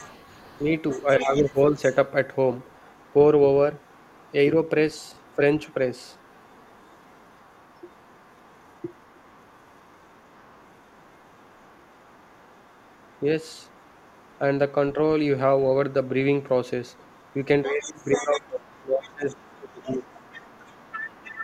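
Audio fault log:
0.0–1.95 s, 2.59–3.14 s, 3.80–4.32 s, 4.68–14.39 s: other side's voice leaking through. A faint second voice sits under the speech, about 25 dB down at first, then about 35 dB down. Likely an echo canceller leaving loudspeaker sound in the microphone.
16.91–17.35 s, 17.68–21.43 s: other side's voice leaking through. A brief faint trace returns, then a much plainer second voice about 15 dB below the speech runs to the end. Likely residual loudspeaker echo the canceller failed to remove.
0.95–1.77 s: speech suppressed in double talk. The talker dips by around 10 dB for about half a second while the other voice plays. Likely the echo canceller turning down both sides together.
17.66–20.16 s: speech suppressed in double talk. The talker's level drops by up to about 20 dB across roughly two seconds while the echo plays. Likely the canceller suppressing both talkers at once.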